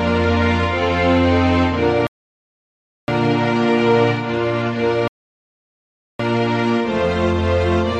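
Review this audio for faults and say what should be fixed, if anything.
Two rebuffering stalls interrupt playback, from 2.07 to 3.08 s and from 5.08 to 6.19 s. Each time the player runs dry and halts until more data arrives, adding about 1.0 s and 1.1 s. The sound then picks up exactly where it stopped, with nothing skipped. On a waveform each shows as a flat line; on a spectrogram, a fully blank vertical band with sharp edges. A larger startup buffer or adaptive bitrate switching would prevent these stalls.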